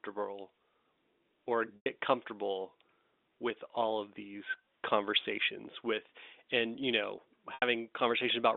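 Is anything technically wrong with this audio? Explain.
Yes, packet loss with pitch repetition occurs twice in this narrowband G.711 telephone audio: at 1.76 s, lasting 100 ms, and at 7.54 s, lasting 80 ms. Each time the receiver filled the gap by looping the last pitch period and fading it over about 50 ms. You hear a brief buzzy hold that dies into silence before the speech cross-fades back in.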